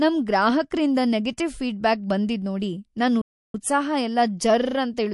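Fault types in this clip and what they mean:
MP3 compression: treble is cut off at a fixed frequency and the sound turns watery and swirly, likely a starved encoder, which fits about 48 kbps.
Playback stall: sound drops out from 3.21 to 3.54 s, about a third of a second, then resumes, likely the player running dry of data.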